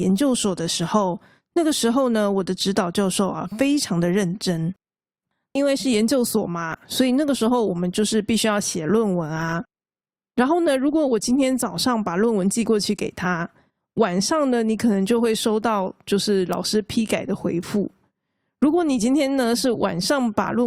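Listening through the speech recording, nothing stood out as a technical fault at any point.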